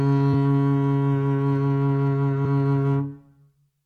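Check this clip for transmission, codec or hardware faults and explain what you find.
One fault turns up in the music. At 2.44 s, damaged data in a compressed stream: corrupt bytes throw the decoder off sync, producing a brief glitch in the sound.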